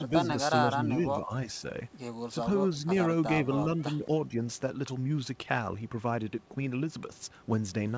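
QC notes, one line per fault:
0.00–0.28, 0.73–1.32, 3.43–3.52, 3.97–4.08 and 4.28–4.34 s: speech suppressed in double talk. The talker's level dips, by around 10 dB in the first two stretches and about 5 dB in the last three. This is likely an echo canceller that, with both ends speaking, mistook this voice for loudspeaker echo and ducked it. On the waveform the envelope sags in patches. On the spectrogram the harmonics thin or break, against the usual G.722 ceiling at 8 kHz.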